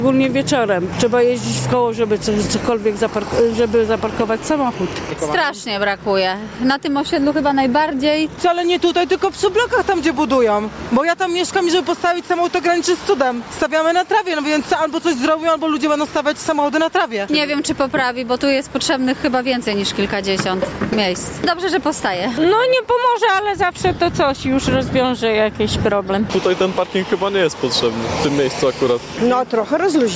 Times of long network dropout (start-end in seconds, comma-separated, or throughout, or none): none